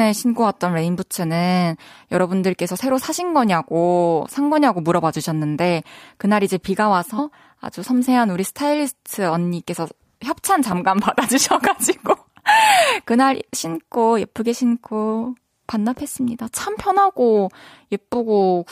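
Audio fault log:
7.18 s, damaged data in a compressed stream: a single brief glitch cuts across the speech. A short stretch of the compressed stream was corrupted, so the decoder could not parse the frame at that point, lost its place in the bitstream and had to hunt for the next valid frame header before decoding resumed. The burst of wrongly decoded data is what produces the glitch.
10.46 to 10.99 s, CD scratch ticks: five ticks in about half a second, roughly seven a second, the longest lasting about 4 ms. A blemish on the disc passed under the laser once per revolution and damaged more data than error correction could rebuild. The player filled or muted those samples, leaving a regular tick each time the flaw came round.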